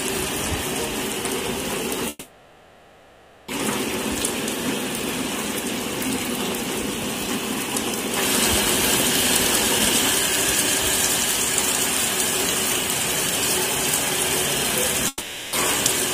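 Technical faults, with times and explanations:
2.09 to 3.49 s, call audio freeze: packets were likely held up in transit, so the jitter buffer ran empty and the receiver stretched the last sound into a fading buzz for about 1.4 s. Playback then resumes exactly where it stopped, nothing lost but everything after now running 1.39 s late.
15.08 to 15.54 s, long network dropout: a run of packets likely never arrived, so the receiver filled about 0.45 s with a decaying continuation of the last sound. The audio then returns with 0.61 s of material missing, a jump forward that leaves playback somewhat less delayed than before.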